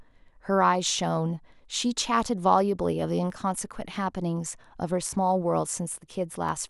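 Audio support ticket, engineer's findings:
Clock drift buffer slips, 0.11 to 6.49 s. Regular clicks in the speech every 1.59 s, about five in all. Likely cause: two devices on independent clocks, mismatched by around 200 ppm. The buffer between them slowly fills or drains, then drops or repeats a small block of samples, on the order of 15, to recover. Each slip leaves a brief discontinuity in the waveform, heard as the click. Check clock sync between the capture and playback paths.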